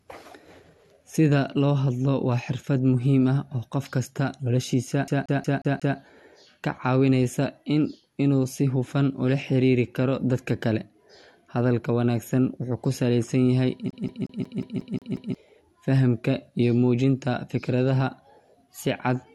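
From 5.08 to 5.98 s, and from 13.91 to 15.35 s after "salaysan yahay", the speech shows a CD stuck on one turn: the laser jumps back one track, so a 180 ms slice repeats five, then eight times, with brief mutes at each jump.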